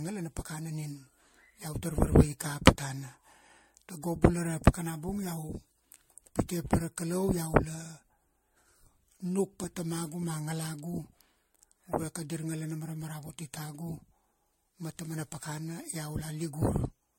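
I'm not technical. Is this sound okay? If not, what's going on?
No. Generation loss runs through the whole speech clip, from start to finish. The voice sounds swirly, smeared and hollow, consonants lose their crispness, and nothing comes through above 16.5 kHz. This is likely from the recording being saved as an MP3, then reopened and saved again about seven times. Each save throws away a little more detail in slightly different places, so the damage piles up instead of staying small.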